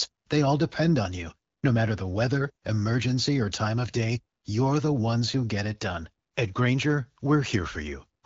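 No technical faults are audible.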